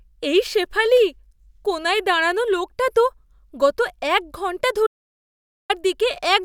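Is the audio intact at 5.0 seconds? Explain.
No. An audio dropout to silence runs from 4.87 s to 5.70 s, covering the 5.0 s mark. The speech cuts off abruptly mid-flow and the gap that follows is silent, with no room tone underneath, before the speech resumes just as suddenly. About 0.83 s of speech is simply missing. The likely cause is a momentary loss of the input, such as a dropped connection or brief mute, while recording carried on writing silence.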